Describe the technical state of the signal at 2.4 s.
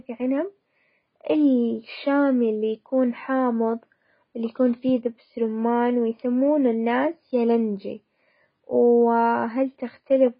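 AAC compression is present at 2.4 s, as it is across the whole speech clip. The damage is heavy and nothing is left above 5 kHz, which points to AAC-LC at a very low rate, fitting roughly 16 kbps. The encoder likely split the signal into frequency lines frame by frame and quantised them coarsely against a hearing model, discarding the top band entirely. The speech there sounds dull and smeared, with a grainy, warbling texture.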